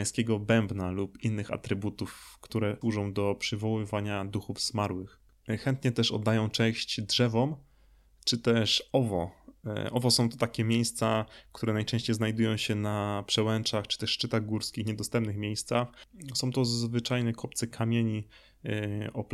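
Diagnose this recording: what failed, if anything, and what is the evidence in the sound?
Nothing failed; the speech shows no audible faults.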